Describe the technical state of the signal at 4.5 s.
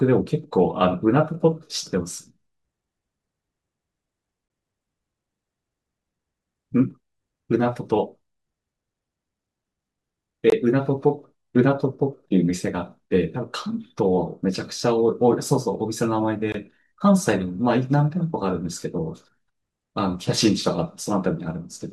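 At 4.5 s the speech breaks on a gap between chunks, from 4.48 to 4.50 s. The audio arrives in blocks of 6.0 s, and about 21 ms of silence sits at this join. Nothing is missing. The flow just stops briefly, heard as a short hole.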